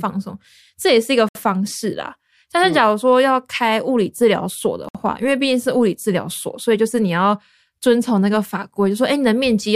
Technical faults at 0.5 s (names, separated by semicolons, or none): none